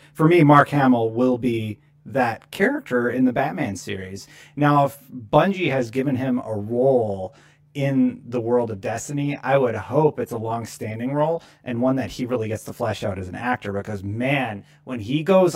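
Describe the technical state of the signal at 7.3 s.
At 7.3 s the speech carries channel delay (comb filtering), and the fault runs through the whole clip. One channel arrives roughly 20 ms after the other, and the two are summed to mono. Content common to both cancels at evenly spaced frequencies. The first notch sits down near 30 Hz, with further notches repeating upward across the spectrum. The result sounds rough and slightly doubled.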